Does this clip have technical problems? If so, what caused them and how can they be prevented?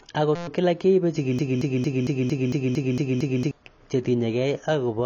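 Yes. Throughout the clip, the speech was likely passed through a low-bitrate AAC-LC encoder, consistent with roughly 24 kbps. At that rate the encoder cannot afford the upper spectrum, so nothing is left above 7 kHz. It also quantises the remaining bands coarsely against its hearing model. The result is plainly audible AAC compression: dull, smeared speech with a warbly, fizzy edge on sibilants. Encoding at a higher bitrate, or keeping a lossless master, prevents it.

From 0.35 to 0.48 s, the computer or its audio driver froze while the sound hardware kept replaying one small ring buffer. This is a system hang loop. A 5.8 ms slice repeats about 21 times, which fits a 256-sample buffer. Cycled at 172 Hz, that short slice is heard as a steady buzz rather than a stutter, and little or no audio is lost. Giving the audio thread real-time priority and using stable drivers prevents such hangs.

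From 1.39 to 3.51 s, the player or stream likely stalled and kept resending the last fragment it held, causing a broken-record loop. A 227 ms piece of the speech repeats back to back, nine times over, for about two seconds. That stretch sounds like a skipping record. Whatever should have played during those two seconds is gone. A larger jitter buffer and a watchdog that outputs silence during a stall, instead of repeating the last fragment, prevent this.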